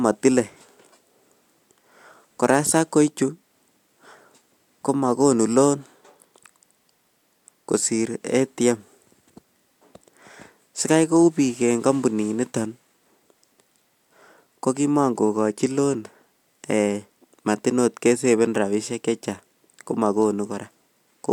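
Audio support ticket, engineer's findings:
No faults found on listening; ticket can close.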